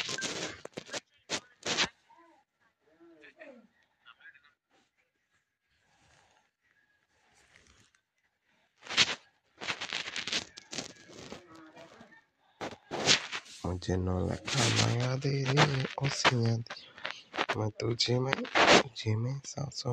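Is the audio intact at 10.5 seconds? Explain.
Yes, the audio is intact at 10.5 seconds, with no dropout, click, distortion or other fault at that moment.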